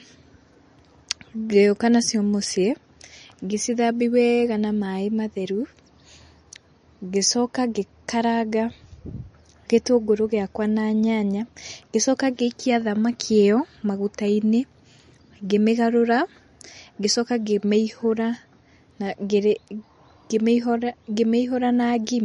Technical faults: MP3 compression

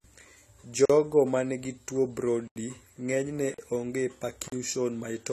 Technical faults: AAC compression; block of digital silence

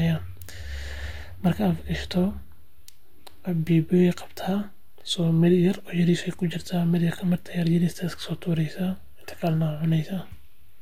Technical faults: DC offset

